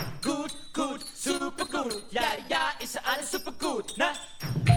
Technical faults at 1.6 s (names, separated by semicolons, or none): repeated stalls (stutter)